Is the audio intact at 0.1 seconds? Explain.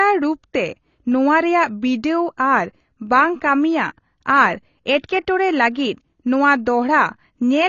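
No, at 0.1 s the speech already carries AAC compression damage, which runs through the whole clip. Nothing reaches above 7 kHz, and the plainly audible smeared, warbling texture, unlike a clean low-pass roll-off, likely comes from coarse quantisation at about 24 kbps.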